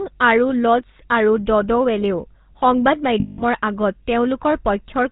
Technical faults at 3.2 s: GSM full-rate codec; lost GSM frames

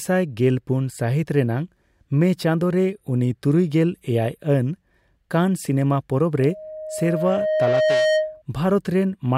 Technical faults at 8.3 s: loudspeaker feedback squeal

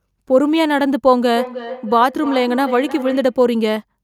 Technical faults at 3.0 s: feedback echo between two devices

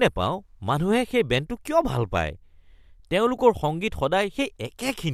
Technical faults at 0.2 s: none

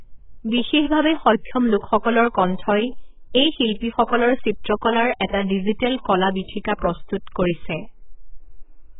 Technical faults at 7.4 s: AAC compression

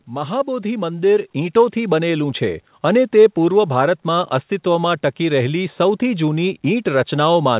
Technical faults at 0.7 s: automatic gain rising

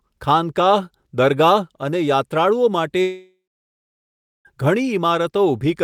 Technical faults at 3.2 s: long network dropout

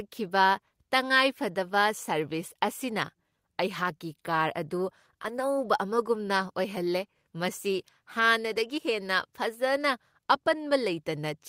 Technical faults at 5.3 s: lost packet rebuilt from error correction

